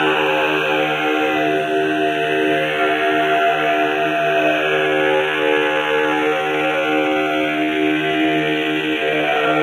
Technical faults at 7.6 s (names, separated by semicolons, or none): time-stretched section